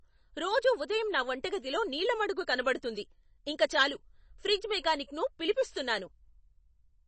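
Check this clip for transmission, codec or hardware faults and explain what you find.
One codec fault runs through the whole clip. Throughout, the speech has nothing above 8.3 kHz and sounds watery, with metallic chirps on s sounds, likely MP3 compression at a bitrate that fits roughly 32 kbps, cutting treble and toggling weak frequency lines between frames.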